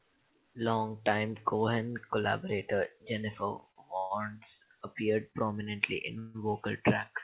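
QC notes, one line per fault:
3.71–3.78 s and 5.31–5.46 s, short stall from a late packet: the speech briefly sticks on one sound, stretched by 43 ms and then 29 ms with a slight buzz or dip, then continues from the same point. A packet arrived late, the jitter buffer ran empty, and the receiver held the last sound until it came, so nothing is lost.
3.98–4.12 s and 6.19–6.48 s, call audio freeze: longer holds of 128 ms and then 152 ms, where the last sound turns into a fading buzz or hiss without reaching silence, then the speech resumes where it stopped. Packets were likely held up in transit and emptied the jitter buffer, adding a gap while losing nothing.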